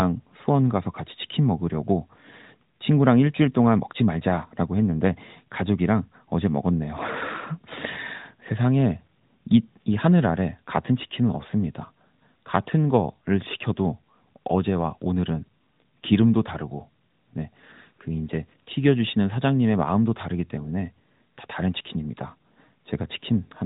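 Nothing goes wrong anywhere in this speech recording, so there's no fault to point to at any moment.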